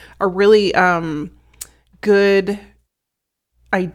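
No technical faults can be heard in this recording.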